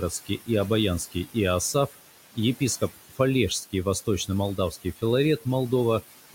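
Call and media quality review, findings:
Noise suppressor artifacts, whole clip. Room noise sits about 15 dB under the speech and gets pulled down about 16 dB in the gaps, then swells back under speech. The suppressor gates bands it reads as steady noise frame by frame, so the floor pumps with the talker.

Speech cut by the noise suppressor at 0.1–0.49 s, 2.81–3.19 s and 4.57–5.03 s. Soft bits get swallowed along with the background, down about 14, 17 and 16 dB at worst. Roughly 150–200 ms is hit per spot. Same component: the suppressor misjudges quiet speech energy as noise and attenuates it with the floor, so those soft bits go faint.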